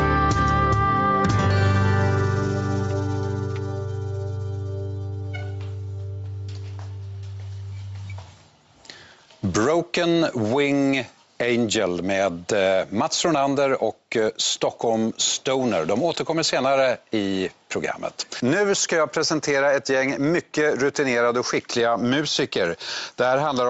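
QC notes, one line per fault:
Throughout, gain pumping: the input gain is likely set far too high, so a fast limiter clamps down on every loud sound, swinging the level by about 10 dB. Loud and soft parts end up closer in level, leaving the sound squashed and flattened.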